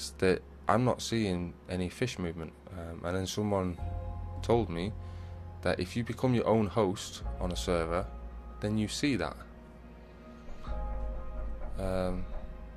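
No faults are audible anywhere in the audio.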